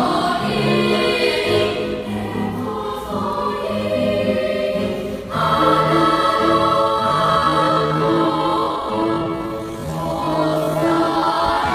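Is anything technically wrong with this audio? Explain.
Yes. A time-stretched section runs from 6.80 s to the end at 11.74 s, likely caused by software slowing this part to about 0.57 times speed while holding pitch by repeating short pieces. The pace suddenly drags.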